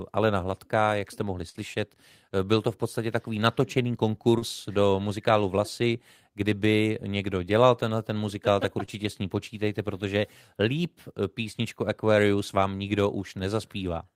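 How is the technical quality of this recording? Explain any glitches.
The recording has three brief network dropouts in the speech, each patched by the receiver and each ending on a rough, rebuilt frame.

At 1.49 to 1.56 s, just after "jak jste mohli", there is a burst of packet loss. The sound turns into a short held, fading smear before resuming a little further on. About 40 ms of audio never arrived, and the receiver spent roughly 48 ms extending the last sound.

At 4.38 to 4.43 s, after "v podstatě takový natočený" and before "do muzikálu", and again at 8.85 to 8.89 s, after "tenhle ten muzikál tak" and before "s ní počítejte protože", there is a short concealed packet loss. Each is a quick wobble or smear. The decoder briefly continued the previous sound to cover the missing audio, 40 ms and 20 ms respectively.

Each of these three events ends with a lost packet rebuilt from error correction, at 1.54 to 1.56 s, 4.41 to 4.43 s and 8.87 to 8.89 s. 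Each is 20 ms of grainier, noisier sound, played from a low-bitrate backup copy carried in the following packet.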